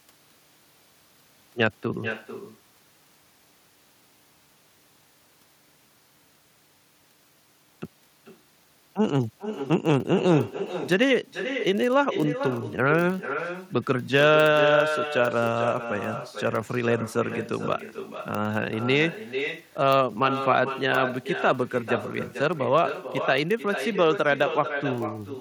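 A low, steady buzz at about 46.9 Hz runs under the speech from start to finish. This is a block size mismatch (padded): one stage hands over blocks slightly shorter than the next stage reads, and zeros fill the remainder, so a tiny gap lands in every block. The buzz rate fits a 1024-sample read block at 48 kHz. The padding is so small that the speech is slowed by only a factor of 0.999, which is inaudible.

Throughout the clip, every phrase is followed, roughly 400 ms later, by a fainter, thinner copy of itself, about 9 dB below the direct speech. This is echo with no canceller. The far end is playing the call over a loudspeaker, its microphone picks that sound back up, and nothing in the chain subtracts it. The returned copy therefore arrives after a full network round trip and trails each utterance.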